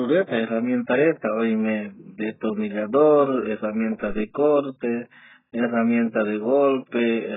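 From start to end, the speech sounds dull and smeared, with nothing above 3.7 kHz. That points to heavy AAC compression, likely at a very low bitrate.

At 4.10 s, after "reta oime destornillador herramienta", a phantom power thump hits. It is a deep supply-switching step that decays within about 38 ms, before "corte herramienta".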